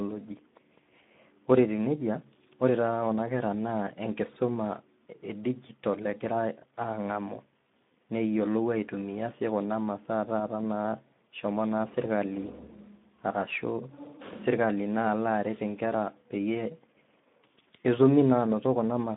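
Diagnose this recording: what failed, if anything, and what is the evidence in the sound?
Codec stage: the Speex codec damages the speech across the whole clip, audibly adding a noisy, hoarse grain. With few bits for the excitation, a bitrate near 11 kbps fits. The band sits at roughly 150 Hz to 3.6 kHz, with nothing above 3.8 kHz.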